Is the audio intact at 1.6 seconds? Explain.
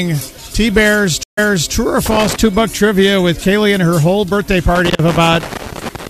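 No. A stream reconnect spans 1.23 to 1.72 s. The connection drops, leaving 141 ms of silence, and a fresh decoder restarts mid-stream. The audio resumes about 0.35 s earlier, repeating material, and the first frame fades in from muted.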